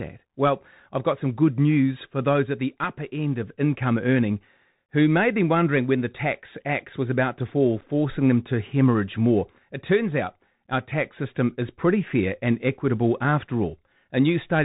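Throughout, the speech carries the Bluetooth CVSD headset codec sound, consistent with a 64 kbps CVSD link. It is a narrowband codec that passes nothing above 4 kHz, so the spectrogram is a flat ceiling with a granular hiss floor, and s sounds turn scratchy where the step lags.

At 7.81 s, between "was about to fall" and "them to hemorrhage more", unconcealed Bluetooth headset packet loss drops about 7.5 ms, roughly a couple of packets. The waveform shows an abrupt gap with hard edges, and the speech returns quieter for a moment.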